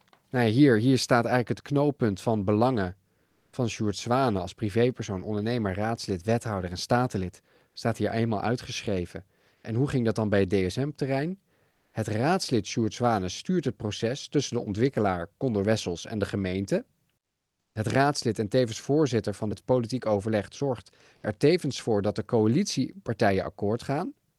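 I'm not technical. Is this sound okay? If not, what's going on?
No. Four short pauses in the speech have comfort noise in place of the background: at 3.25 to 3.53 s after "het knooppunt van belangen", 9.55 to 9.63 s between "staat hier eenmaal uitgeschreven" and "hoe ging dat dan", 11.71 to 11.93 s, and 17.19 to 17.75 s between "en de gemeente" and "raadslid en tevens voorzitter". In each gap the real room sound becomes a flat, artificial hiss, clearly quieter in the last one. The likely cause is a call system that pauses sending when nobody talks and fills the silence itself.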